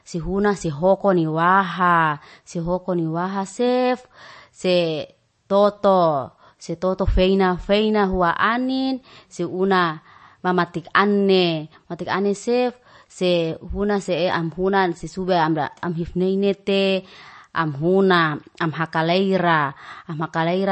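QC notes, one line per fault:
Throughout, MP3 compression: speech sounds watery and swirly with nothing above 8.3 kHz. This fits low-bitrate MP3, likely near 34 kbps. The spectrogram shows a flat ceiling and flickering gaps.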